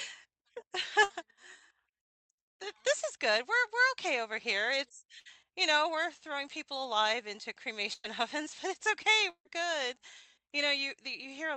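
Bursts of packet loss occur at 1.03 to 1.11 s, 5.19 to 5.27 s and 7.93 to 8.06 s. Each time, a short run of the call's audio was lost or arrived too late to be played, so the receiver stretched the last sound it had, fading it out, for about 60 ms in the first two and about 105 ms in the third. That fill comes across as a brief held buzz or a fading hiss. The third ends in roughly 10 ms of silence. Playback then jumps ahead, skipping about 60, 60 and 100 ms of speech respectively.

A long network dropout is the likely cause of the gap from 9.30 to 9.47 s, heard through the call path's 8 kHz audio band. The last sound is carried on as a fading buzz or hiss for about 154 ms, and about 70 ms of it thins to silence before the speech returns. Around 160 ms of the original speech is gone at the point where it resumes.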